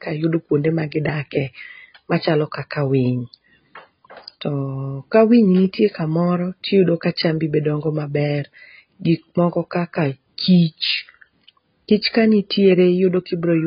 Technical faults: transcoding between lossy codecs

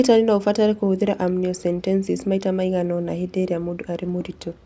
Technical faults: none

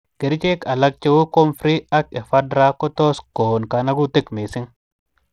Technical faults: Bluetooth SBC compression

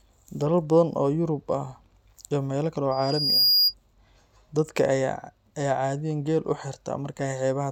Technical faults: loudspeaker feedback squeal

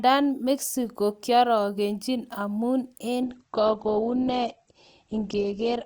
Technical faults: adaptive stream at a lower bitrate

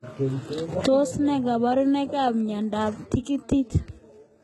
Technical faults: HE-AAC compression

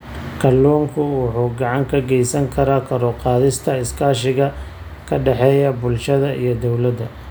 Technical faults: none

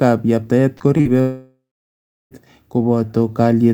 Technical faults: repeated packet loss (robotic sound); long network dropout

